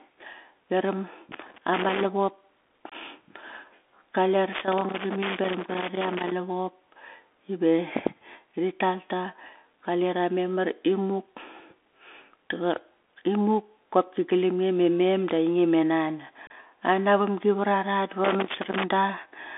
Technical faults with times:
0.00-19.58 Bluetooth CVSD headset codec
1.32-2.04 loose connector crackle
2.90-2.93 unconcealed Bluetooth headset packet loss
4.53-6.32 loose connector crackle
16.47-16.51 unconcealed Bluetooth headset packet loss
18.24-18.84 loose connector crackle

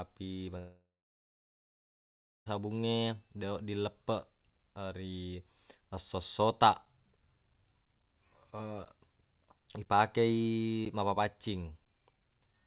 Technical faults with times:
0.58-2.48 long network dropout
6.85-12.67 periodic USB or driver dropouts

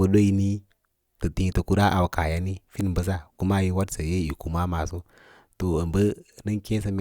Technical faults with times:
none

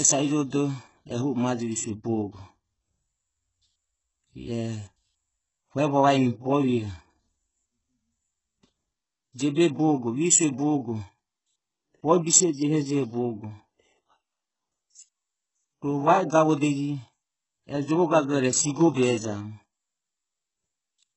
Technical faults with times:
0.00-21.17 HE-AAC compression
18.56-19.40 processor overload crackle

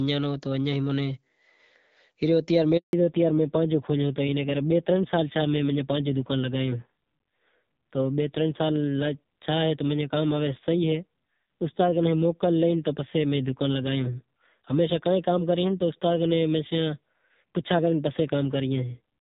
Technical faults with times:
2.77-2.93 handover gap
2.93-19.21 fallback to narrowband

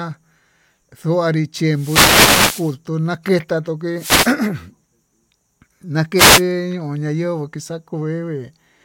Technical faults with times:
1.72-2.76 wireless microphone noise hit
3.95-4.37 wireless microphone noise hit
6.16-6.43 wireless microphone noise hit

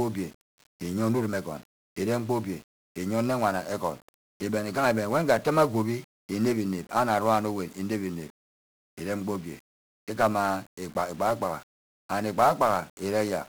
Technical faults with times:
0.00-13.48 1-bit DFPWM compression

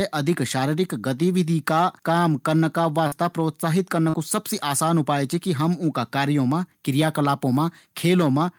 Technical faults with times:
3.07-3.13 short concealed packet loss
4.09-4.15 short concealed packet loss

